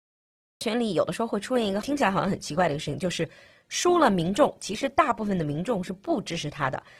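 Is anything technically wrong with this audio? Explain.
Yes, two things. There's a cut-off start: digital silence until 0.61 s, then the speech comes in mid-sound with no natural attack, because the capture began late. From 1.54 s to the end you hear an adaptive stream at a lower bitrate. The quality changes suddenly and codec artefacts thicken without any gap, which fits a switch from about 64 to 16 kbit/s Opus.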